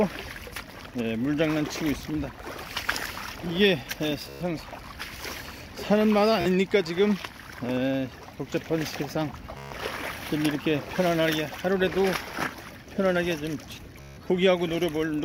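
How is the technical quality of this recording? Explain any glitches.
The recording is marred by two kinds of fault.

From 0.05 to 7.13 s, a train of clicks: about fifty irregular pops, near seven per second, roughly as loud as the audio, likely from interference or a struggling interface.

Bluetooth stutter occurs at 4.29–4.41 s, 6.41–6.46 s, 9.57–9.72 s and 14.01–14.17 s. Late packets make the receiver repeat a short slice, giving a brief buzz of 44 to 160 ms before the audio resumes further on.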